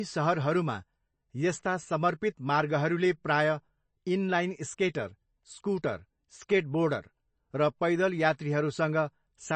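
From start to finish the speech carries plainly audible MP3 compression, likely from encoding at a very low bitrate, which fits something near 31 kbps. Nothing survives above 8.3 kHz, where the encoder has cut the treble to save bits, and weak frequency lines flicker on and off between frames, giving a watery, swirling quality with chirpy s sounds and smeared onsets. Those shifting artefacts distinguish it from a plain low-pass filter, which would only sound dull.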